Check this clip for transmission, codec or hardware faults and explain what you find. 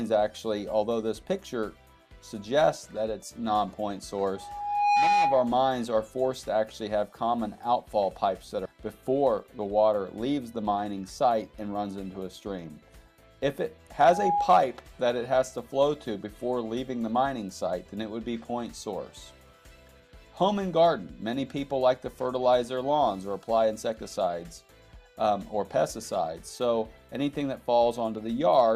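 Three kinds of fault turn up: two bursts of feedback, one jump forward, and two short speed-ups right after it.

Loudspeaker feedback squeal hits from 4.35 to 5.64 s and again from 13.96 to 14.58 s. A mic is hearing its own speaker, and at 821 Hz the loop gain tops one. The tone swells over about half a second the first time and about a third of a second the second time, ending up around 5 dB above the audio.

A skip ahead happens at 8.65 to 8.67 s. Roughly a second of audio got dropped while later audio was already queued, so playback lurches forward with no gap filled in. The two sides are butted straight together, and the delay shrinks by about a second.

Jitter buffer speed-up follows from 9.21 to 9.68 s and from 10.64 to 11.76 s. The buffer was holding more than it wanted, so it snipped out pitch-period-sized slices, around 50 ms and 100 ms in total. Playback runs at 110% speed with the pitch unchanged and sounds a bit hurried.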